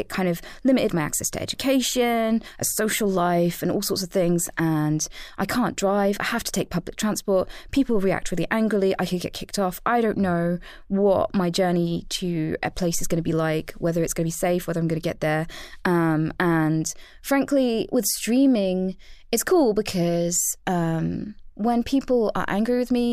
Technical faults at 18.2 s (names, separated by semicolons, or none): dropped samples